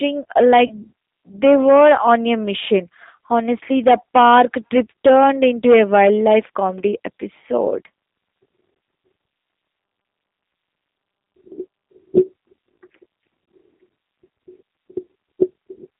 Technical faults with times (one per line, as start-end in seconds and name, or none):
0.00-15.99 G.729 codec
0.67-0.73 VoIP packet loss concealed by the speech codec
6.81-6.83 VoIP packet loss concealed by the speech codec